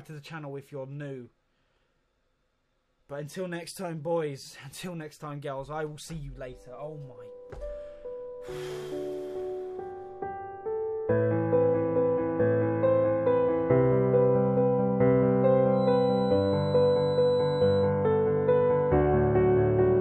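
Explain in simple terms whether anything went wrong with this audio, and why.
A thin, high whistle, around 4 kHz, sits quietly behind the sound from about 15.7 to 17.92 seconds. It stays steady in pitch and swells and fades slowly in loudness before it stops. This is a feedback whistle. It was likely caused by a loudspeaker's output leaking back into the microphone at the edge of feedback. That loop keeps one high pitch ringing without letting it grow into a full howl.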